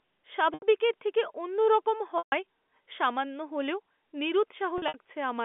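Packet loss with pitch repetition at 0.54 s, just before "থেকে অন্যরকম", and 2.18 s, right after it, bridges 80 and 140 ms gaps with a held, buzzy repeated pitch cycle fading to quiet. At 4.78 s, 100 ms of shorter dropouts are scattered across 0.16 s, all over the narrow telephone band.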